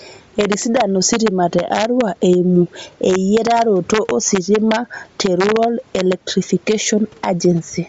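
Integer overflow runs throughout the speech. The loudest peaks push only about 1 dB past the integer limit, so a tiny fraction of samples wrap to the opposite sign instead of being clamped, producing sharp, violent cracks much harsher than ordinary clipping. Gain pumping is also present throughout, likely from an input gain set too high with a fast limiter pulling it down around 10 dB on each loud syllable, leaving the delivery squashed. Bluetooth LC3 compression colours the whole clip, with the likely cause being a low-bitrate link in 10 ms frames, consistent with roughly 32 kbps. Nothing is present above 7.7 kHz, and the noise-filled upper band gives the speech a plainly audible breathy, grainy edge. The room noise sits far beneath the speech, about 41 dB down.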